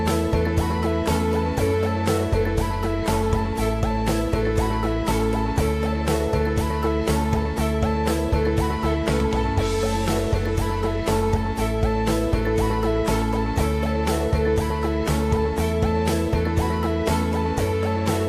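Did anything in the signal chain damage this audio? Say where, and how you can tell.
No, nothing in the chain audibly damaged this audio; no stage leaves a mark anywhere in the clip.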